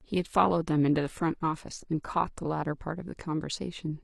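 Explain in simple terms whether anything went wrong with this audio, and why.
Yes, something went wrong: this is an adaptive stream starting at a low bitrate. To start quickly, the player began on a heavily compressed version of the speech, then switched to a better one at 2.54 s. Until then the sound is dull and fizzy, and it improves suddenly without any gap.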